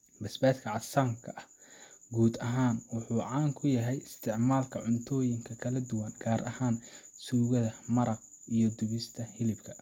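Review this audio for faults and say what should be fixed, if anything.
Nothing here needs fixing, so the recording can stay as it is.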